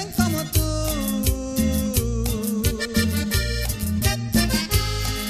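No technical faults can be heard anywhere in this audio. Nothing in it needs to be flagged.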